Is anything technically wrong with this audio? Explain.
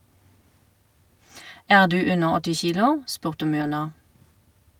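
Yes. A lost packet rebuilt from error correction occurs at 1.87 to 1.89 s and again at 3.61 to 3.67 s. The speech has no dropout either time. Instead, a lower-bitrate copy of the missing audio carried in the following packet was decoded in its place. That produces briefly rougher, noisier speech: 20 ms in the first instance, and about 40 ms in the second, which points to two lost packets.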